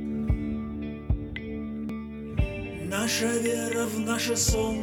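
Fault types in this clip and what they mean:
Audio missing between chunks: The sound skips abruptly at 1.89 s and 3.85 s, about two seconds apart. Roughly 50 ms vanishes each time, with both sides butted together. The likely cause is a recorder working in 2-second chunks, dropping audio at each changeover.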